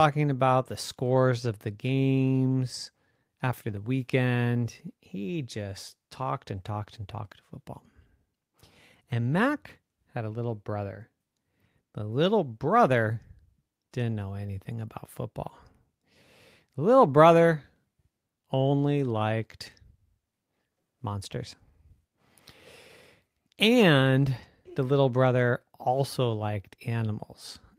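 Nothing goes wrong anywhere in this bit of speech; there's no dropout, glitch or other technical fault to point to at any moment.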